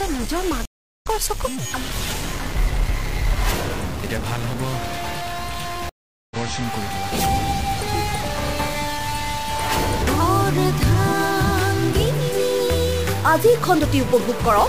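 Distortion runs through the whole clip, and quieter passages fill with noise. The likely cause is a stuck bit, one data bit held permanently at 0 or 1 by a broken data line or converter. Roughly half of all sample values then land off by that bit's fixed weight, in a pattern that follows the waveform. Near silence, small values crossing zero flip the bit's effect, which turns pauses into noise.

From 0.65 s to 1.07 s the audio drops out, with about 0.36 s of silence, and then picks up at a later point, having skipped roughly 0.3 s. The same thing happens from 5.89 s to 6.36 s: about 0.42 s of silence, then a jump forward of roughly 0.4 s. Both are stream reconnects. The connection broke, the player fell silent, reconnected, and started a fresh decoder partway into the live stream, so the skipped material is simply gone.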